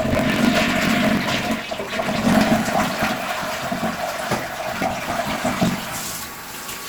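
Block size mismatch (truncated) runs from start to finish. One stage hands over longer blocks than the next stage takes in, so the tail of every block is discarded. The chopped joins repeat about 47 times a second, which fits a 1024-sample read block, and they produce a steady low buzz. Because material is lost at every block, the sound plays about 1.12 times faster than it should, while its pitch stays roughly where it belongs.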